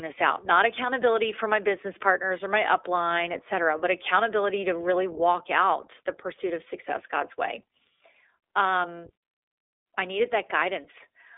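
Throughout, the iLBC codec leaves the spectrogram empty above 3.7 kHz and makes the speech plainly rough and synthetic, coding each 20 ms frame independently.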